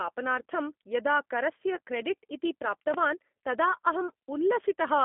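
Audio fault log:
throughout G.729 codec: The speech is confined to roughly 200 Hz to 3.5 kHz and rebuilt from a vocal tract filter, pitch predictor and sparse pulses, giving a plainly rough, synthetic edge that fits an 8 kbit/s G.729A voice link.
1.75 to 1.78 s VoIP packet loss concealed by the speech codec: For about 20 ms of lost audio the decoder extends its last pitch and filter at falling gain, so the speech briefly smears into a fading buzzy tone or coloured noise, and it stays weak or distorted afterwards while the frames rebuild.
2.94 to 2.96 s loud pop: A single sharp pop, peaking about 10 dB above the speech, sits on top of the audio while the speech continues underneath. It is likely caused by a sudden voltage step from a switch, plug, static discharge or driver glitch.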